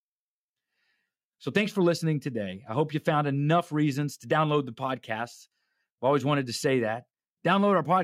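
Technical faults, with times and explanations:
No technical faults are audible anywhere in this speech recording.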